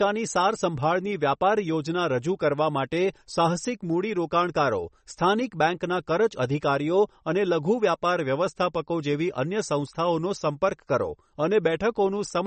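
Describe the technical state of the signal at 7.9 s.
MP3 compression is present at 7.9 s, as it is across the whole clip. The speech has nothing above 8.4 kHz, and weak frequency components flicker between frames, giving a plainly audible watery, swirly texture with smeared attacks. The likely cause is a very low bitrate, one that fits roughly 32 kbps.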